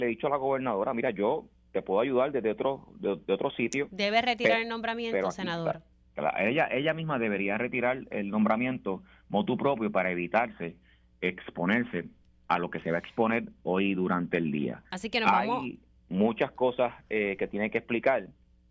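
No technical fault can be heard anywhere in this audio. Nothing in the signal chain draws attention to itself at any point.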